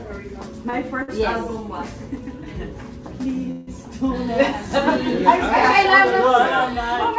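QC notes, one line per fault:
0.70–0.75 s and 1.03–1.10 s, short stall from a late packet: at each point the sound is held a little too long, by about 29 ms and then 52 ms, with a faint buzzy smear before it carries on from where it stopped. The jitter buffer ran dry waiting for a packet, and the receiver stretched the last sound to bridge the wait. Nothing is lost. Unlike a freeze, these are brief, with no fade into hiss.
3.51–3.69 s, call audio freeze: for about 163 ms the last sound is drawn out as a decaying buzz that never quite reaches silence, then the audio resumes at the same point. Packets were likely held up in transit long enough to empty the jitter buffer, so a gap has been inserted, not cut out. It is far longer than the two stalls, and its fading, hissy tail sets it apart from their brief held sound. The band above 8 kHz is empty throughout, which fits a wideband call codec such as G.722.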